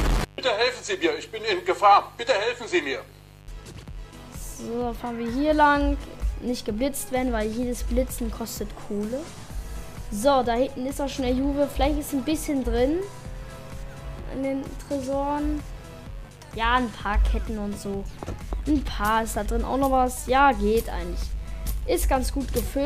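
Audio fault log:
throughout – mains buzz: a steady, raspy buzz sits under the whole sound, about 25 dB below it and never letting up. It comes from 50 Hz mains interference, where sharp switching spikes from something like a dimmer, a rectifier or a missing shield get into the signal path twice in every cycle. Those spikes repeat 100 times a second and spread energy across 50 Hz harmonics reaching several kHz, which turns a plain hum into this gritty, edged buzz.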